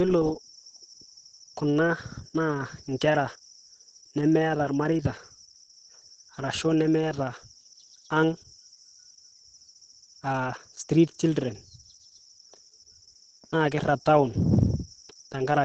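From start to finish the speech carries heavy Opus voice compression, running in its SILK speech mode. Nothing above roughly 8 kHz survives, so there's no air or sibilant sparkle, and the coarse excitation coding leaves the voice hoarse, muffled and faintly robotic. That level of damage points to a starved rate somewhere near 10 kbps, coded in 20 ms frames.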